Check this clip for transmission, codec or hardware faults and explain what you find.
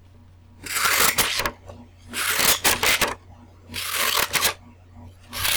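Integer overflow occurs four times: 0.77–1.46 s, 2.31–3.04 s, 3.99–4.47 s and 5.46–5.56 s. The signal is driven about 17, 19, 16 and 8 dB past full scale, and instead of being limited, the values wrap to the opposite sign. Each loud peak flips across the whole range, producing violent, harsh cracks far sharper than ordinary clipping.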